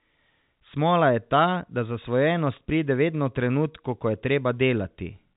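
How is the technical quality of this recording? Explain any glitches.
No glitches are audible anywhere in this recording.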